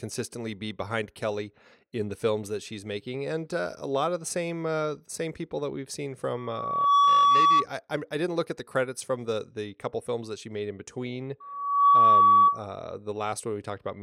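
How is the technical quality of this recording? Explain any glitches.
Two bursts of loudspeaker feedback squeal mar the speech, from 6.37 to 7.66 s and from 11.40 to 12.64 s. Each time a steady tone at 1.1 kHz swells over roughly half a second until it sits about 15 dB above the speech. The microphone is hearing the loudspeaker it drives, and at 1.1 kHz the loop gain exceeds unity, so that frequency feeds on itself and climbs into a sustained squeal until the loop is broken.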